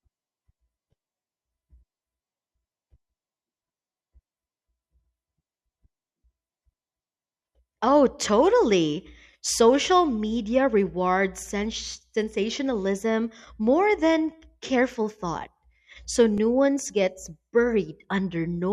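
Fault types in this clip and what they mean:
Block of digital silence: at 16.38 s the speech drops to silence for about 2.7 ms, which fits a 128-sample output buffer that was not filled in time. The abrupt cut out and back in produces a single sharp tick.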